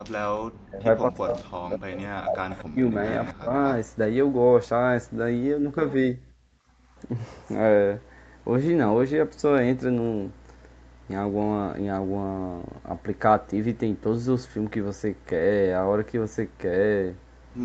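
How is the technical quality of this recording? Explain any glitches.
The first four seconds of the recording have several echo-canceller glitches: a brief room-sound dropout, repeated dips in the talker's speech, and faint delayed echoes. The audio carries nothing above 8 kHz, as expected from call microphone processing.

Background gated by the echo canceller, 0.00 to 0.07 s: the room sound drops out almost completely, by about 40 dB, for the first 70 ms and then returns. The canceller clamped the microphone down hard while the loudspeaker was playing, then let go.

Speech suppressed in double talk, 0.35 to 0.85 s, 1.02 to 2.95 s and 3.39 to 3.52 s: the talker's speech dips steeply, by tens of decibels at worst. This is likely the canceller mistaking overlapping speech from both sides for echo and turning everything down.

Echo leak at 1.39 to 1.43 s, 2.52 to 2.64 s, 3.27 to 3.34 s and 3.65 to 3.75 s: short scraps of a delayed copy of the speech arrive 241 ms late, well below the main speech and loudest around 3.3 s. 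The likely cause is a loudspeaker echo that the canceller failed to remove fully.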